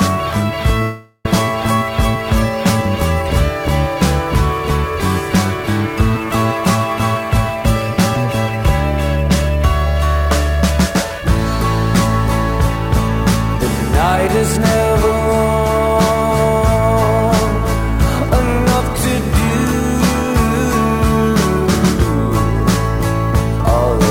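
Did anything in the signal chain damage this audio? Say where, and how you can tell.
Yes. At the converter, sample clock jitter runs through the whole clip. A fine hiss and roughness sit on the sound. They thicken on loud and bright passages and drop away in quiet moments. The error tracks the slope of the waveform, so fast, high-frequency content suffers most. That is the signature of an unstable sampling clock. The timing error is on the order of 10 microseconds, leaving an error floor roughly 25 dB under the signal.

Between 0.82 and 1.26 s, the sound breaks off. A fading buzz-like continuation of the last sound fills about 0.42 s. Then comes a short silence of about 20 ms before the audio returns. What resumes has skipped ahead. About 0.42 s of material never plays. This is likely a long network dropout. Packets stopped arriving, and the receiver's concealment stretched the previous sound until it gave up.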